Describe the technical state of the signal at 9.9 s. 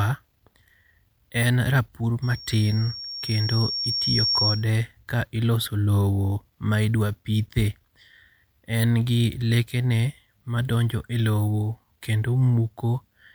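The signal at 9.9 s is intact, with no fault audible at that moment.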